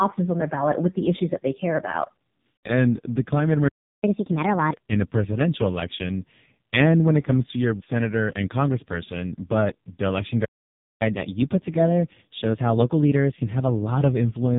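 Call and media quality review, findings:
AMR narrowband mobile codec, whole clip. Speech is band-limited with nothing above 3.8 kHz, so it's dull and boxy. Heavy buzzy, synthetic colouring from the vocal-tract model having very few pulses per subframe to work with. That level of damage fits AMR-NB's lowest 4.75 kbps mode. Pretty rough listening, tbh.

Playback stall, 3.68 to 4.03 s. Output drops to silence for about 350 ms mid-phrase, then resumes. Likely the player buffer ran dry or the audio thread got blocked.

Catch-up at higher speed, 4.03 to 4.73 s. Right after the stall the player runs its backlog at 1.5x by resampling, so pitch jumps roughly 7 semitones and speech sounds chipmunky until it drops back.

Catch-up at higher speed, 11.0 to 14.0 s. Gentler pass at 1.1x with a slight pitch lift, a semitone or two. Same resampling catch-up.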